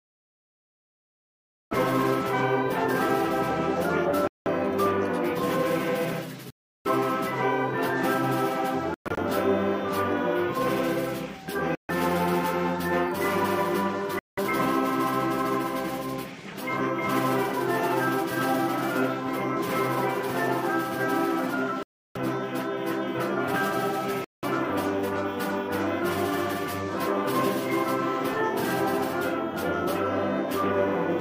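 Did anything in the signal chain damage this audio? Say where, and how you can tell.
Yes. The damage happens at playback, likely in a Bluetooth link, as Bluetooth dropouts. The sound goes silent at 4.27–4.48, 6.50–6.87, 8.94–9.18, 11.75–11.91, 14.19–14.39, 21.83–22.17 and 24.24–24.45 s. The gaps run from about 0.14 to 0.35 s, and the one near 9 s is broken into scattered pieces, the longest 0.12 s. Each time the sound resumes further on, as if it had kept playing. A buffer underrun would pause and then continue late instead.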